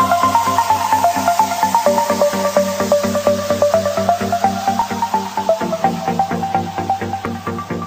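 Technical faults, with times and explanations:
0.77 s, 4.82 s and 7.26 s, dropped buffer (overrun). Each moment has a small forward jump in the sound. There is no gap of silence. A short stretch of audio is simply missing, and the two sides meet directly. The losses are roughly 10 ms, 5 ms and 15 ms. The likely cause is the program not reading its input in time, so the hardware overwrote samples before they were collected.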